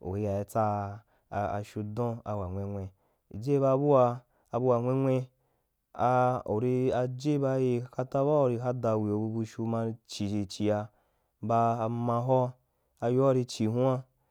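Speech recording, no technical faults detected.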